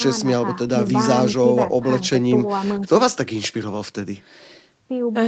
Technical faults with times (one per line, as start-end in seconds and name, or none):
none